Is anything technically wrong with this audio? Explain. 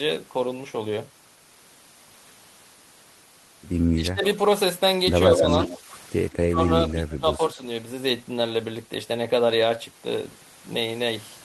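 Yes. The speech has two faults from a call with an echo canceller.

Speech suppressed in double talk occurs from 3.96 to 4.24 s, 5.29 to 5.9 s, 6.52 to 6.59 s and 6.92 to 7.6 s. The level dips in pieces. The first dip is the deepest, about 15 dB. The others are shallower, around 5 to 10 dB. The likely cause is both sides talking at once. The canceller then cannot separate this talker from its own loudspeaker echo, so it turns everything down.

An echo leak is heard from 5.35 to 5.78 s, and again briefly from 6.32 to 6.37 s. A delayed copy of the voice trails it by about 146 ms. In the first stretch the copy is roughly as loud as the speech itself, so it sounds like a doubled voice. The second is a faint scrap, far below the speech. This is likely a far-end loudspeaker whose canceller failed to remove what its microphone picked up, sending it back.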